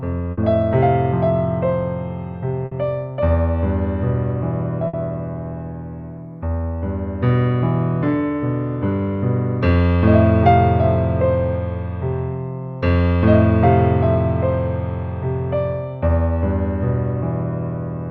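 Bursts of packet loss at 0.31, 2.65 and 4.87 s: each time about 60 ms never arrived, so the receiver stretched and faded the last sound before resuming further on.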